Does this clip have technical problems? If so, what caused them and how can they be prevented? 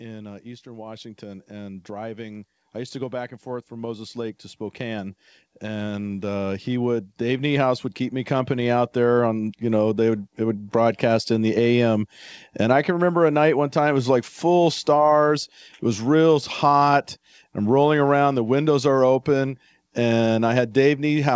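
Yes. Automatic gain rising runs from 0.42 s to 9.5 s. The call's gain control judged the input too quiet and kept raising its gain, by about 18 dB in all, so speech and background noise swell together until the level settles just before "you know they would". A waveform shows the envelope widening steadily over those nine seconds, and a spectrogram shows the noise floor brightening along with the speech. Setting a proper microphone level or disabling automatic gain control would prevent it. The empty band above 8 kHz is the normal ceiling of a wideband call codec, which fits G.722, and is not a fault.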